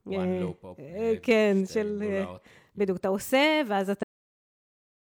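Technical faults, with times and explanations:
3.99–4.46 s: AAC frame loss with muting. About 0.43 s of the speech drops out as a soft-edged hole, consistent with roughly ten lost AAC frames whose spectra the decoder zeroed, so overlapping windows fade the level down and back.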